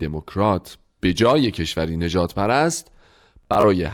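Audio packets over the wireless link arrived late or not at all, so the receiver kept replaying its last buffer until fresh data came, a Bluetooth stutter. At 0.33 s a single brief dropout of about 15 ms repeats a tiny slice of the speech as a quick hiccup. From 3.43 to 3.64 s about 100 ms goes missing in gaps scattered over 200 ms, the longest lasting 29 ms, which fits several lost packets. The repeats stack into a rapid machine-gun buzz before the speech jumps ahead.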